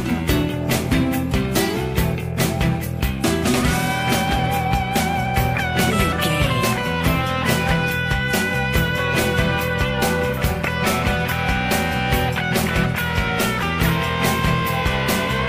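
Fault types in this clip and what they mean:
Nothing stood out as a fault on listening to this audio.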